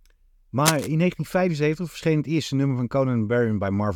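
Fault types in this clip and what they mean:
Cable scratch noise: from 0.65 to 0.91 s, dense, uneven crackling rustles over the speech at nearly the speech's own level, likely from a worn cable or connector being moved. On a spectrogram it shows as ragged broadband smearing; the waveform shows jagged spiky bursts.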